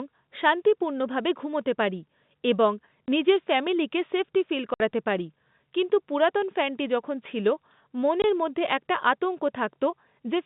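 At 3.06 s, after "শান্তিপূর্ণভাবে ঘুমোতে পারি এবং", at 4.74–4.80 s and at 8.22–8.24 s, the phone-band audio drops out: packet loss filled with silence. The holes run 20 or 60 ms, which fits 20 ms packets, and are dead silent with hard edges rather than smeared or repeated as concealment would leave them.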